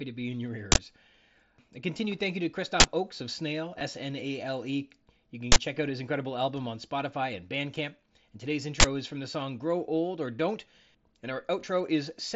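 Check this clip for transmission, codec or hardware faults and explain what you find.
Two faults are present in this speech, carried over the mSBC headset codec: four uninitialised-buffer bursts and one brief concealed packet loss.

Uninitialised buffer: at 0.72 s (just after "to be in your"), 2.8 s (after "continued thank you to"), 5.52 s (just before "check out his incredible") and 8.8 s. Each is a 40 ms block played before real audio was written, so stale memory comes out as a loud digital crack. On the waveform these are short dense bursts. The spectrogram shows broadband vertical bars.

Concealed Bluetooth headset packet loss: at 3.79 s, about 15 ms of audio went missing between headset and phone. The receiver filled the gap by repeating a matching stretch of recent waveform, leaving a buzzy blip. The waveform shows a small periodic repeat, and the spectrogram a thin smear of harmonics.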